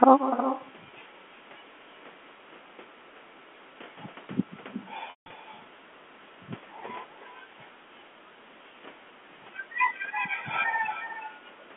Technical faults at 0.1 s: echo with no canceller

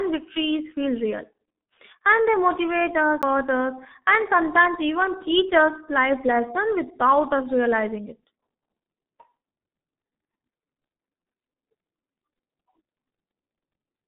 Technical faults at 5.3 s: G.723.1 codec

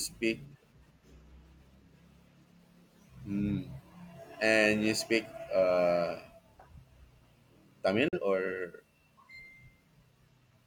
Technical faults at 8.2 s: digital broadcast dropout

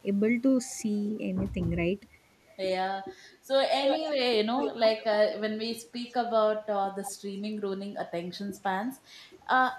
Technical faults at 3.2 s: none

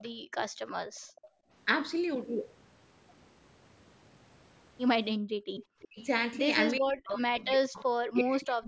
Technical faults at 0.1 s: echo leak; background gated by the echo canceller

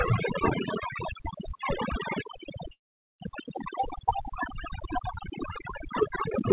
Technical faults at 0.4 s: overdone noise removal

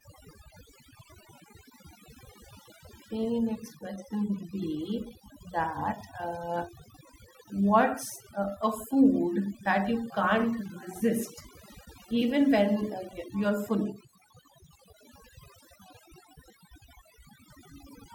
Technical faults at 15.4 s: overdone noise removal

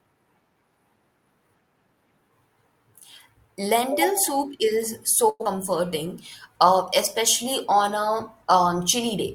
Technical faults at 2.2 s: none

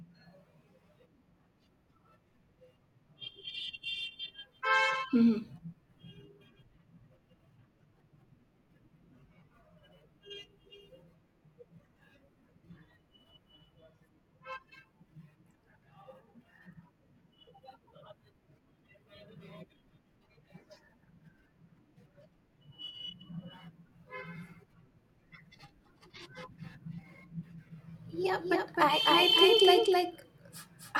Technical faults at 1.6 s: none

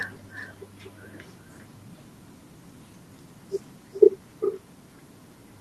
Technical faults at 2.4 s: echo with no canceller

